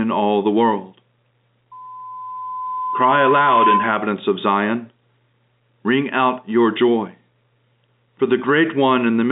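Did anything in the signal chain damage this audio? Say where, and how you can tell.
Yes. A 1 kHz tone swells from 1.71 s to 4.09 s, peaking about 5 dB above the speech. This is loudspeaker feedback squeal: the microphone picks up its own loudspeaker.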